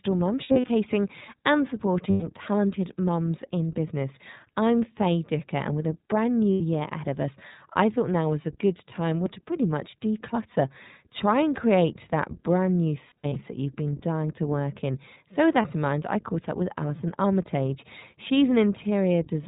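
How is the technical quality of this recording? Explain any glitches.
The speech is intelligible but noticeably degraded, with plainly audible iLBC codec coloration throughout and five brief dropouts from lost iLBC frames.

iLBC codec: the narrowband coding at around 15.2 kbps removes everything above 4 kHz, leaving a rough, synthetic timbre. On a spectrogram it shows as a hard ceiling at 4 kHz.

Lost iLBC frames: these occur at 0.44–0.69 s (160 ms of loss scattered over 240 ms, with the longest run about 70 ms), 2.10–2.24 s (120 ms), 6.54–6.62 s (80 ms, between "and with a brand" and "ahead of us I"), 13.08–13.36 s (180 ms of loss over 280 ms, between "create that brand new" and "that you've been") and 15.62–15.66 s (20 ms, just before "in mind I caught"). At each one the decoder repeats the last pitch cycle mixed with noise, so the gap sounds like a held, buzzy vowel. The speech recovers almost immediately afterwards. 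On a spectrogram these appear as flat, smeared harmonic stripes, and in the waveform as repetitive, fading cycles.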